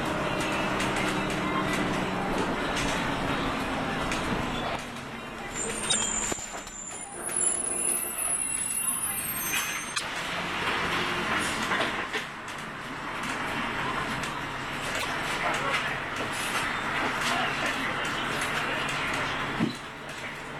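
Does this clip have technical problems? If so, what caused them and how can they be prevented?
Yes. A broken MP3 bit reservoir is the likely cause of three short glitches, at 5.89 to 5.96 s, 9.94 to 10.01 s and 14.98 to 15.05 s. Each lasts about 70 ms, close to three MP3 frames of about 26 ms. At each point the audio skips ahead. Frames had been dropped, and the frames after the cut reached back for borrowed data that was no longer there, decoding bytes from the wrong frame. To prevent it, cut or stream MP3 only at clean frame boundaries, or re-encode after editing, so that no frame depends on data that has been removed.

USB whine runs from 15.43 s to the end of the clip as a steady 8 kHz tone, roughly 40 dB below the sound. The pitch matches the USB bus's 125-microsecond microframes. The bus draws current in bursts at that rate, and the ripple leaks through shared power or ground into the analogue audio path, where it is heard as a fixed high whine. 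To prevent it, power the audio interface separately or use a USB isolator or ground-loop breaker, and keep the audio cabling away from busy USB devices.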